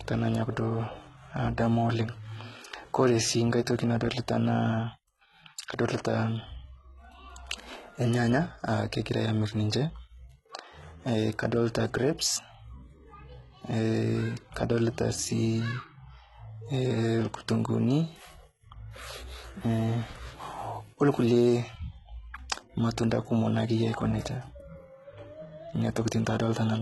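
From start to finish the speech carries heavy codec damage that likely comes from HE-AAC compression at a very low rate, consistent with roughly 16 kbps. Only the lower spectrum is truly coded; the treble is rebuilt by copying lower bands upward, so s sounds turn gritty and lispy with a metallic sheen. A spectrogram shows repeated, smeared high-band patterns that don't align with the real harmonics, and a hard ceiling with nothing above 11.8 kHz.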